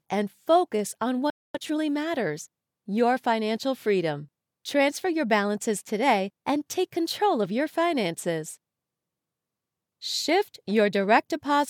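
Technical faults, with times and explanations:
1.30–1.55 s, playback stall: the sound stops mid-flow for about 0.24 s of silence, likely because the player ran short of data or its thread was blocked.
1.55–1.79 s, time-compressed catch-up: the audio rushes at twice normal speed at an unchanged pitch, as the player trims its backlog by cutting out short pieces and cross-fading the joins.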